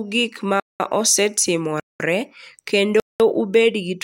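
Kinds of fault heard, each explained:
Gap between chunks: the speech arrives in blocks of about 1 s, and a 200 ms stretch of silence sits between consecutive blocks, so the sound is interrupted rather than lost. The first hole opens right after "gik ma" at 0.60 s, and the others follow at 1.80 s and 3.00 s, each ending abruptly. On a waveform each appears as a dead-flat line with cliff-like edges; on a spectrogram, as clean, full-height blank columns evenly spaced.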